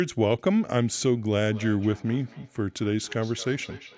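From 1.47 s to the end, the speech picks up feedback echo between two devices. A second device replays this microphone's sound, which is captured again, repeating roughly every fifth of a second at about -20 dB. The spectrogram shows faint, evenly spaced copies trailing each syllable.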